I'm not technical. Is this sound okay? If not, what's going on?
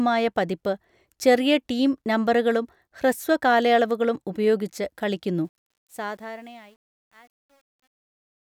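No. After "ഹ്രസ്വ കാലയളവുകളും ഉപയോഗിച്ച് കളിക്കുന്നു", the fade-out from about 5.5 s turns gritty, worst from 6.21 s to the end. This is truncation distortion on a fade: too little detail is kept as it gets quieter.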